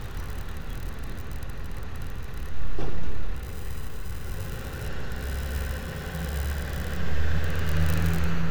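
Nothing in the sound stood out as a technical problem on listening.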